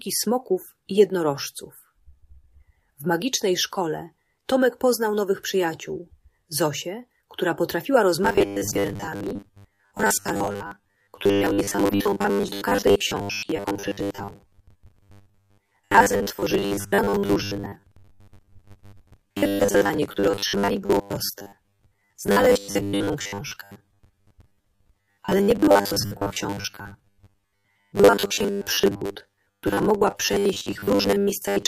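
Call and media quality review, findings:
Robotic sound from repeated short buffers, 8.24 s to end. Rigid 100 Hz buzz over most of the audio. Likely starved playout buffer looping 10 ms chunks.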